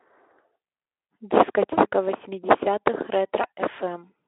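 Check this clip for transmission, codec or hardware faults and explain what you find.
Two short dropouts show VoIP packet loss concealed by the speech codec. At 1.73 to 1.80 s, about 40 ms of audio goes missing, consistent with two lost frames. At 3.41 to 3.45 s, about 20 ms is lost. The decoder fills each gap by extending its last pitch and spectral shape at falling gain. The speech briefly turns into a buzzy tone or coloured noise that fades, then stays weak or distorted just after the gap. The Speex coding and its 300 Hz to 3.5 kHz telephone band can be heard throughout.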